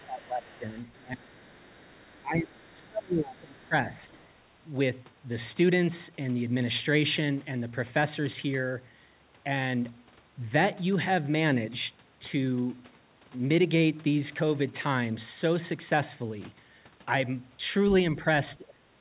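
From 0.0 to 4.32 s, a faint second voice runs beneath the main speech, roughly 30 dB lower. This is the other side's voice leaking through, likely loudspeaker echo the canceller missed. On a spectrogram it appears as weak, separate harmonic traces filling the gaps, all capped at 4 kHz like the rest of the audio, which fits a G.711 A-law call path at 64 kbps.

Inside that stretch, from 0.06 to 1.47 s and again from 2.21 to 3.96 s, the main speech ducks by up to about 25 dB, for roughly one second and one and a half seconds in total. From 18.16 s to the end it drops again, by about 30 dB. This is speech suppressed in double talk, likely the canceller turning down everything while both sides overlapped. The waveform envelope caves in or breaks into chunks, and the spectrogram's harmonics fade to dark patches.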